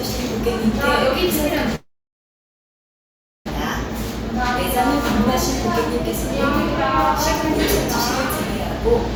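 At 1.75 s the sound stops and a call audio freeze holds until 3.48 s. The last sound smears into a brief fading buzz, then about 1.6 s of silence. Packets were likely delayed and the jitter buffer emptied. Playback resumes where it left off, nothing lost, just late.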